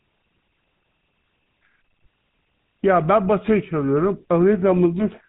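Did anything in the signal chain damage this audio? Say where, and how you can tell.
Yes, at the codec: GSM full-rate damage throughout. Nothing passes above 4 kHz, and pulse-driven excitation leaves a buzzy, gravelly roughness, consistent with 13 kbps coding.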